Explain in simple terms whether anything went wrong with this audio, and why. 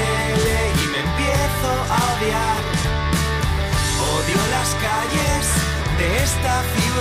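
Nothing stood out on listening; no fault could be heard anywhere in the recording.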